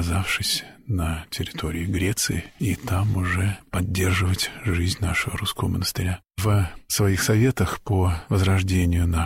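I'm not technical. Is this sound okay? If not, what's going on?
Yes, nothing here needs fixing.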